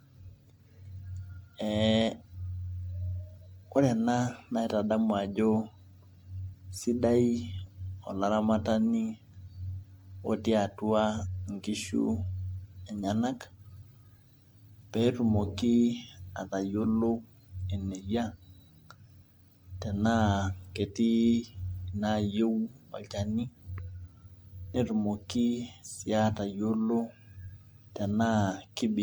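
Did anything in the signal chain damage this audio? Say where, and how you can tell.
Yes. Throughout the speech the sound is swirly and hollow, with smeared consonant attacks, worse than the bandwidth reaching about 20.2 kHz would suggest. At the codec stage, this is likely generation loss: repeated MP3 re-encoding, perhaps ten times at around 96 kbit/s, with each pass piling up quantisation noise and spectral holes.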